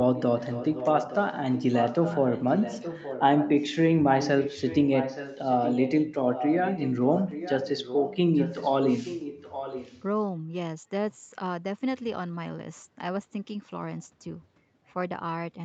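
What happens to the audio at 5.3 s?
An echo leak, likely from a loudspeaker at the far end whose echo canceller failed to remove what its microphone picked up, runs from 4.15 to 5.92 s. A copy of the speech returns about 0.87 s late, roughly 10 dB quieter, trailing the original.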